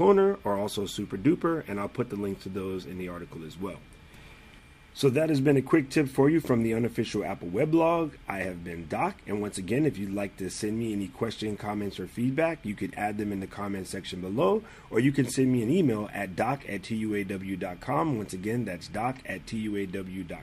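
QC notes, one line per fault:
Nothing to flag here, as there's no fault anywhere in the clip.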